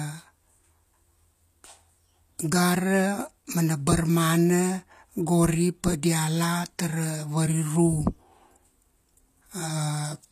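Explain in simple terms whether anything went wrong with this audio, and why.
Throughout the speech, the s sounds turn gritty and lispy. Likely HE-AAC compression, which fakes the treble by copying lower sound upward, so it stays bright but rings false rather than simply sounding muffled.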